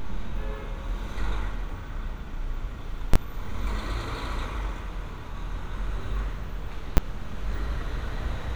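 A recording of everyday sounds with two sharp bangs. These are invalid numbers at full scale. A calculation produced invalid values that were pinned to maximum level. The blocks run 3.14 to 3.16 s, lasting 20 ms, and at 6.97 s, lasting 10 ms.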